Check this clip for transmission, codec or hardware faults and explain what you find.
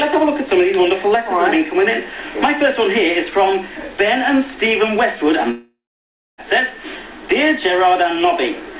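There's one real fault here, a long network dropout from about 5.51 to 6.41 s, all heard through the call path's band limit with nothing above 4 kHz, which fits G.711 A-law at 64 kbps. Around 0.87 s of audio just never shows up, and the receiver papers over the gap by stretching the last sound into a buzzy tail that fades. That leaves roughly 0.63 s of flat silence before the sound picks up again with the lost piece gone. The likely cause is a run of packets lost in transit.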